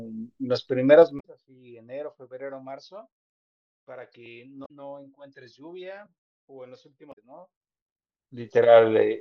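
From 0.94 to 1.54 s the speech is pulled down by roughly 25 dB with zipper noise: the gain moves in coarse steps of about 2 dB, around ten per second, with no smoothing between them. Each jump puts a small click on the waveform, so the fade carries an audible ticking rather than a clean slide.

Inside that fade, at 1.17 to 1.24 s, damaged data in the compressed stream produces a brief glitch. The decoder hits corrupted frames, loses sync and skips forward to the next valid header, which disrupts the audio. The same blip recurs at 4.62 to 4.70 s and again at 7.09 to 7.18 s.

From 7.53 to 8.64 s the level comes back up by roughly 25 dB with the same zipper noise, again in steps of about 2 dB at around ten per second, and the ticking rides on the speech for the length of the rise.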